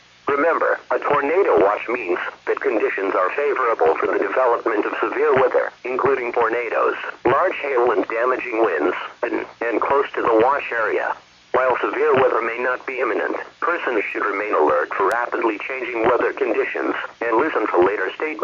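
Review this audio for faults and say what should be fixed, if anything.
Bit error spikes at 14.11 s (one sample, about -34 dBFS) and 15.12 s (three samples, about -9 dBFS): isolated power-of-two value jumps, unlike dropouts or edit clicks, which follow signal discontinuities. Prevent them with error-checked digital links and memory.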